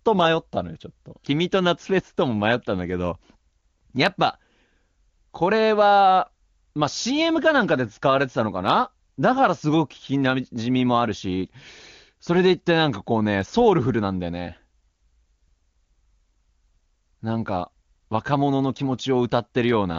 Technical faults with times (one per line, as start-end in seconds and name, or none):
none